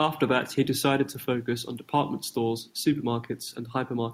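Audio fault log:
No faults are present in this speech recording. Nothing heard in it calls for an entry in this log.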